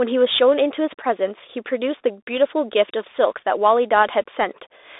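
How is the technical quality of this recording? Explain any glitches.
The recording carries Bluetooth CVSD headset codec damage throughout, and it is plainly audible. The line is narrowband, passing roughly 300 Hz to 3.7 kHz, which fits a 64 kbps CVSD link. The codec sends one bit per sample to step the waveform up or down with an adaptive step size, so fast, loud high-frequency content outruns the step and distorts. S sounds come through scratchy, and a granular hiss sits under the speech.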